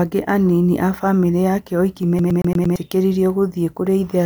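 CD stuck on one turn, 2.19 to 2.76 s, just after "a famĩlĩ yake oiki": the laser jumps back repeatedly, replaying a 0.11 s slice of speech five times in a fast, even stutter.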